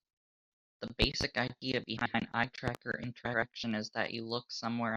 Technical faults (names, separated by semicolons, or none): loud pop; frames out of order